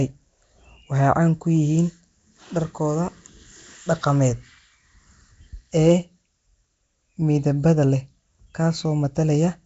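Speech coded with what is likely Nellymoser compression, the old Flash microphone codec, whose fixed low bit budget, consistent with about 32 kbps, starves weak bands and fills them with noise. Throughout, the speech carries a rough, hissy halo and smeared, underwater quality, with nothing above 7.8 kHz.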